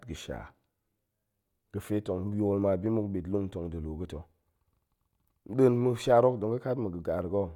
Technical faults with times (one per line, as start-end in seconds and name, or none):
none